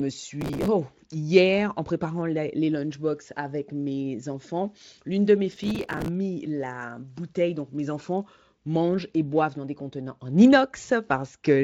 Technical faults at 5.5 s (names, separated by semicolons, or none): processor overload crackle